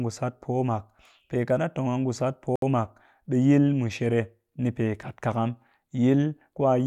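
Bluetooth stall at 2.56 to 2.62 s: the speech drops to silence for about 66 ms, then resumes just before "mak ɓe". The cause is likely radio interference delaying packets on the wireless link, so the headphones' buffer emptied and playback halted until the retransmitted audio arrived. It sounds like a brief, clean hole in the speech rather than a crackle or glitch, with the speech carrying on afterward as if simply paused.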